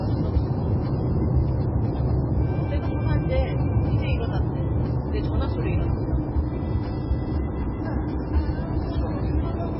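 From start to finish the sound is watery and swirly, with smeared attacks and no treble above 5.5 kHz, which points to heavy MP3 compression, likely at a very low bitrate near 16 kbps. A spectrogram shows a flat ceiling at 5.5 kHz and flickering holes beneath.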